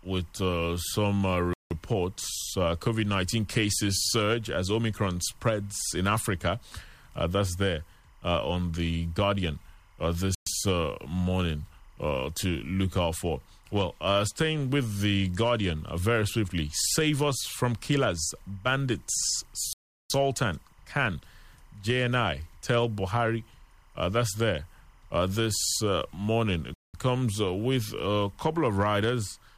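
Timecode bleed runs through the whole recording as a faint, steady chirping warble behind the speech, roughly 40 dB below it. Linear timecode carried on a neighbouring track or cable has leaked into the audio path. That code is a square wave flipping between tones near 1 kHz and 2 kHz, and at 25 frames per second its bit pattern repeats quickly enough to form a continuous buzzy twitter rather than separate clicks.

The Bluetooth stall faults appear as four short dropouts to silence: 1.53 to 1.71 s (175 ms), 10.35 to 10.47 s (118 ms), 19.73 to 20.10 s (370 ms, the longest), and 26.74 to 26.94 s (198 ms). Each is a hard gap in the speech rather than a fade. The likely cause is radio interference delaying packets on the wireless link until the headphone buffer ran empty, leaving nothing to play until retransmitted data arrived.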